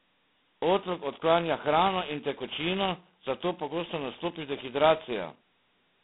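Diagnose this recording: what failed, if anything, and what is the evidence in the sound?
The codec stage failed. Throughout the speech, a harsh, rasping hiss rides on the signal and rises and falls with its level, so it swells on loud syllables and drops away in pauses. The band is confined to telephone width, roughly 150 Hz to 3.6 kHz, with nothing above 3.8 kHz. This is G.726 ADPCM quantising the prediction error with very few bits per sample. The heavy damage fits the 16 kbit/s mode, where each sample carries only two bits.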